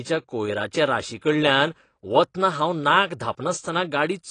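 From start to finish the speech sounds dull and smeared, with nothing above 9.9 kHz and a fizzy, warbling edge on sibilants. This is likely AAC compression at a low bitrate, which fits AAC-LC near 32 kbps. The encoder discards the highs and coarsely quantises the rest.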